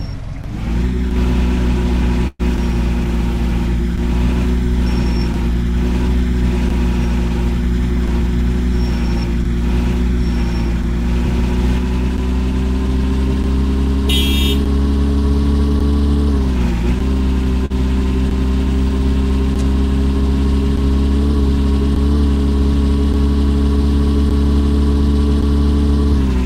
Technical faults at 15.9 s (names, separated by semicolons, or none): jitter buffer speed-up